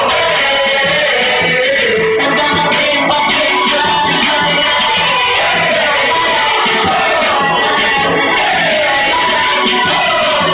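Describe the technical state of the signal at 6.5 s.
At 6.5 s the audio has aliasing, present throughout the clip. Content above 4 kHz was not filtered before resampling, which fits a drop to 8 kHz. It folds back as gritty, metallic false tones roughly 15 dB down.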